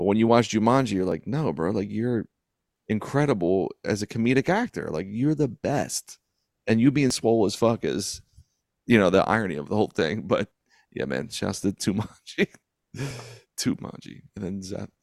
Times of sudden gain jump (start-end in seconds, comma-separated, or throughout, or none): none